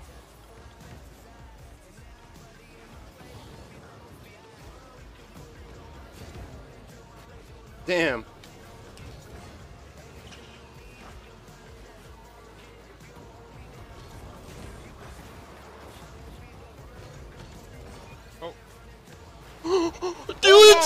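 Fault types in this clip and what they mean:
Dropped buffer (overrun): four skips where roughly 40 ms of audio vanishes, likely overwritten buffers; waveform shows abrupt splices, spectrogram thin vertical broadband lines.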